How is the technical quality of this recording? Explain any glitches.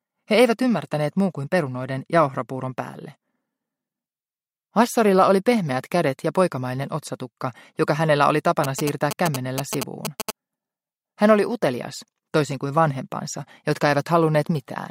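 One glitch stands out: GSM signalling bursts from 8.64 to 10.31 s. A nearby 2G phone exchanging control traffic with its network transmits short clusters of radio pulses, and the recording circuitry rectifies them into audio. The result is a galloping dit-dit-dit of brief buzzes at about 217 Hz, only slightly quieter than the main sound. On a spectrogram it shows as a comb of harmonics stacked on 217 Hz, switching on and off in blocks. The waveform carries a dense train of sharp, regularly spaced spikes.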